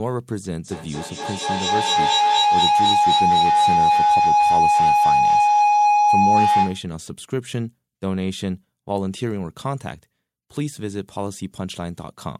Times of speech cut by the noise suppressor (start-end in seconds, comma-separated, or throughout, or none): none